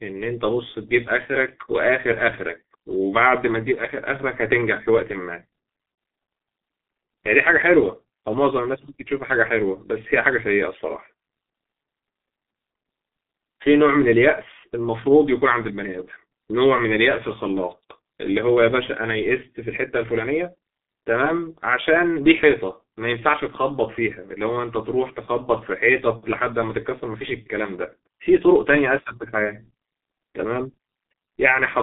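From start to finish the speech carries heavy G.723.1 codec damage. Nothing survives above about 3.8 kHz, so it's muffled, and the slow-updating voice model at what sounds like roughly 6 kbit/s leaves it hoarse with smeared consonants, squeezed into a 200 Hz to 3.6 kHz phone band.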